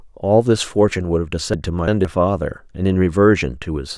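Chunks out of order, from 1.54 to 2.05 s: one block of about 170.67 ms of speech plays two blocks later than it should. Nothing is missing, but the sequence is shuffled, leaving three hard joins and a brief jumbled, garbled stretch.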